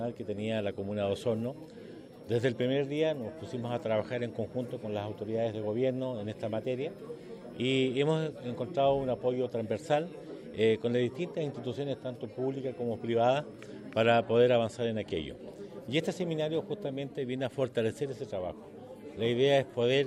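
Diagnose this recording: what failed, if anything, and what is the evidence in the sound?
The analogue power stage failed, producing a switching supply whistle. From 0.0 to 14.05 s a high tone near 5 kHz sits about 45 dB below the signal, wandering between 4.95 and 5.54 kHz. The supply's regulator is bursting at audible rates, shifting pitch as load changes.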